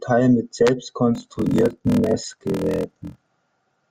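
Block size mismatch (padded) runs from 1.13 s to 3.31 s, starting just after "mit selbst". One stage hands over shorter blocks than the next stage expects, and the shortfall in each block is filled with silence. That chops a tiny gap into the speech on every block, producing a 41.7 Hz buzz. The speech also drags to 0.889 times normal speed, which fits 1024-sample blocks padded out to about 1152.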